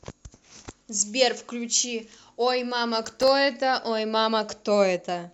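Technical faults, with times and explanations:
3.05–3.28 s, processor overload crackle: a short burst of gritty, tearing crackle rides over the speech for about a quarter of a second and then stops cleanly. The processor fell behind and missed around fifteen buffer deadlines over that stretch. Each miss dropped a sliver of silence with hard edges into the signal. The tiny length of each gap fits a buffer of roughly 1.5 ms, and so many clicks packed this closely fuse into one rough, sputtering texture.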